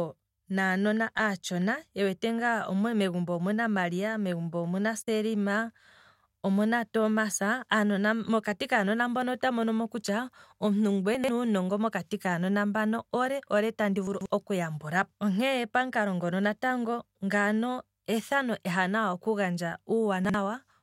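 At 11.15 s, 14.07 s (after "mbano ole ole tandi") and 20.25 s, chunks out of order: 46 ms blocks play two, three and one chunk late. Each is a jumbled moment, with three abrupt vertical seams on the spectrogram.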